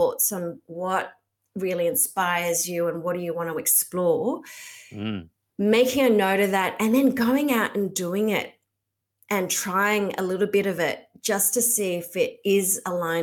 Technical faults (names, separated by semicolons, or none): none